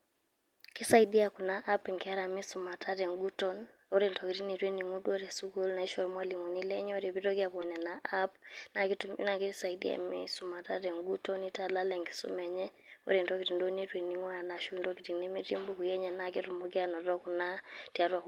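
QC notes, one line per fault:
7.61 s, skip ahead: playback jumps forward at this point, and about 0.4 s of speech is simply gone. Nothing fills the hole; the audio on either side is butted together, so the sound lurches mid-flow and the listening delay shortens by roughly the same amount. On a waveform the envelope changes abruptly at a single point with no silent gap, and on a spectrogram harmonic tracks break off and restart without any transition.
7.77–9.99 s, jitter buffer speed-up: straight after the jump, the receiver keeps trimming tiny pitch-period-sized pieces to drain surplus buffered audio. The speech runs at about 106% of normal pace while the pitch stays the same, which makes it sound slightly hurried, and around 150 ms is removed in total. On a spectrogram, syllables look compressed in time while harmonic spacing stays put. On a waveform, voiced cycles show small, repeated seams where periods were removed.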